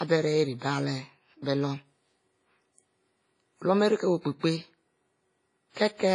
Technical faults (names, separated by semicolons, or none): WMA compression; pre-echo